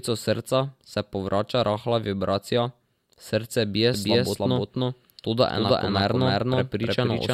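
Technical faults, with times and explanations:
3.94 s to end, doubled audio track: right after "srce bije", a second full-band copy of the speech enters abruptly and runs to the end, trailing the original by roughly 0.3 s at about the same level. Unlike an echo or reverb tail, it has no decay, no room colouring and no further repeats, just one clean duplicate. The likely cause is a second capture path or an edit leaving two copies out of step.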